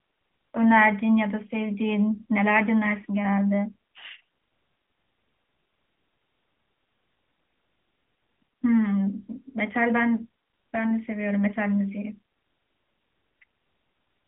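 From start to finish, the speech passes through an AMR narrowband mobile codec. The band is squeezed to roughly 200 Hz to 3.4 kHz, and nothing survives above 3.5 kHz. Sibilants lose their edge. The voice sounds thin and boxed in. The codec rebuilds speech from a vocal-tract model fed by sparse pulses, and the damage is plainly audible as a buzzy, synthetic grain. That texture fits a mid-rate mode near 10 kbps.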